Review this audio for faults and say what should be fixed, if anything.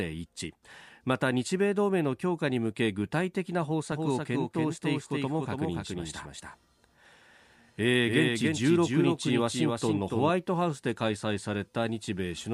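Doubled audio track, 3.92 to 10.30 s: a slower second capture path or an overlapping edit likely mixes in a copy about 5 dB quieter, roughly 300 ms behind. Route the source through a single capture path and check edits for stacked duplicate regions before export.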